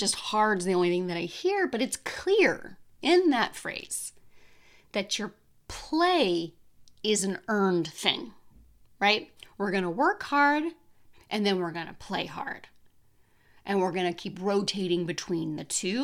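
Nothing in the recording stood out as a technical fault on listening.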